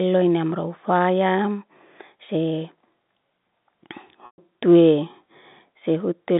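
At 4.26 s the audio briefly holds and buzzes, then fades to nothing until about 4.38 s: packet loss with pitch repetition. Around 120 ms went missing, which fits six 20 ms packets. The receiver bridged the gap by looping the last pitch period, faded it out over roughly 50 ms, and cross-faded back in. That held, buzzy tail sets it apart from a plain dropout, which cuts straight to silence. All of it sits inside the narrow 150 Hz to 3.7 kHz telephone band of the G.711 line.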